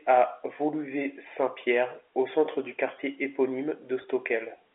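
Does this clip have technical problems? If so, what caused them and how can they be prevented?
Yes. From 4.02 to 4.04 s, about 20 ms of audio was lost, which fits a single dropped packet, and the receiver filled the gap with packet loss concealment using pitch repetition, replaying the last pitch period. This brief stretch sounds slightly held and buzzy. Using a larger jitter buffer or forward error correction on the network path would prevent the gap.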